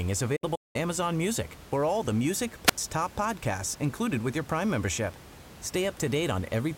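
From 0.36 to 0.76 s there is a digital broadcast dropout: the receiver stopped getting valid frames and muted, with 8 ms fades. About 256 ms of audio is lost in holes scattered across roughly 384 ms, the longest a 192 ms gap.

At 2.66 to 2.78 s, just before "top podcasts included with", a wireless microphone squelch dropout occurs. The radio link weakened until the squelch closed, giving a short lift in hiss, an 84 ms mute, then the audio returning above the room noise.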